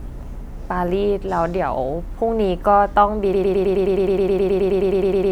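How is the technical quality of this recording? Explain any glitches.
The recording breaks down in its final stretch. From 3.33 s to the end, the speech turns into a broken-record loop: a fragment of about 0.11 s plays back to back, identically, some 19 times. The likely cause is a stalled player or stream that kept resending the last piece it held, so the speech meant for those two seconds is gone. Unlike an echo, each repeat has the same level and timbre with no decay, giving a rapid mechanical buzz-stutter.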